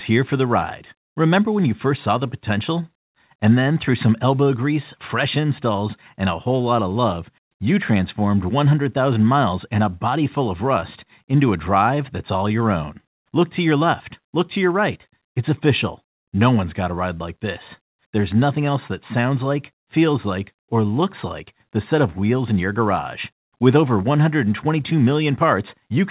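The clip is speech carried over a call path using G.711 mu-law at 64 kbps, so nothing is heard above 4 kHz. The fault is clock drift between sender and receiver. The sender's clock runs roughly 2% slow. The receiver's jitter buffer therefore keeps draining, and the receiver must fill the gap. This small timing hiccup recurs at uneven intervals through the whole clip. The result is repeated timing corrections from 0.13 s to 25.81 s. They all go the same way: the receiver repeats short pieces, playing the speech at about 98% speed. Together they add around half a second. Each edit is small. It may come across as a brief hiccup or an unsteady tempo.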